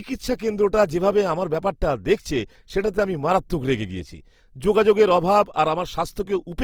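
Throughout, the speech sounds grainy and rough, most likely from Opus compression near 24 kbps filling starved bands with noise. It swirls less than MP3 would, and content reaches about 20.2 kHz.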